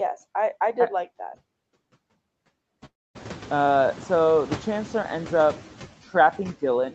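Throughout the speech, the background noise dips between phrases and swells back under the voice. These are noise suppressor artifacts, from frame-by-frame cuts of about 12 dB on the steady noise. From 2.85 s to 3.17 s, the sound trails off into a brief fading buzz and then near-silence, and about 0.3 s of audio is missing when it resumes. The likely cause is a long network dropout.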